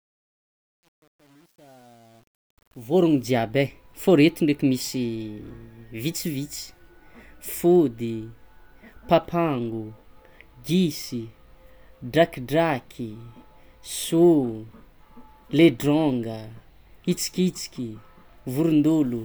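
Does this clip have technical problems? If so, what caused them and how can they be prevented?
Yes. Truncation distortion on the fade-in, 0.0 to 3.28 s, worst before 2.84 s: with no dither, the low level turns into gritty steps, which fits a stage keeping only 9 bits. Prevent it by fading at full resolution and adding dither before any reduction in bit depth.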